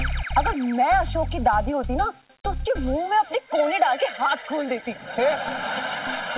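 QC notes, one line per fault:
Nothing to flag here; the sound came through the call path with nothing above 4 kHz, which fits G.711 mu-law at 64 kbps.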